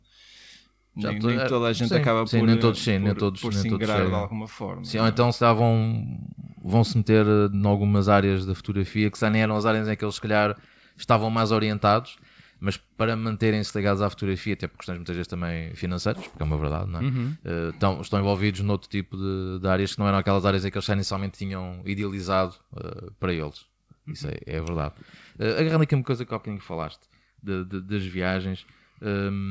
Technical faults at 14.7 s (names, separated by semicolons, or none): none